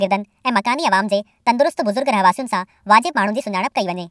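Speech runs throughout at the wrong sample rate. It is 1.5 times too fast and about 7 semitones high, which fits 16 kHz audio played at 24 kHz. Unlike a pitch shift or time-stretch, tempo and pitch rise together by one ratio.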